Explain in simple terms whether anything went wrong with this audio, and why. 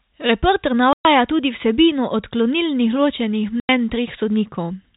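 The speech cuts out twice, with sudden gaps: about 120 ms of silence at 0.93 s, just before "tudi vsebino odklonilnih", and 90 ms at 3.6 s. This is packet loss filled with silence: chunks of audio, likely about 30 ms each, never arrived, and the receiver played nothing instead.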